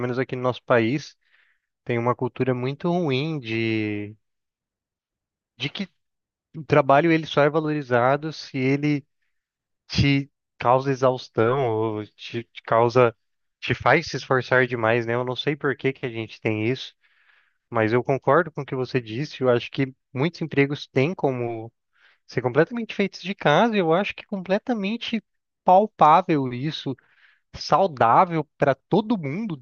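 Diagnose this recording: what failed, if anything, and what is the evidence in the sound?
Nothing in the recording points to a failure at any stage of the chain. There is no event in the sound that calls for a diagnosis.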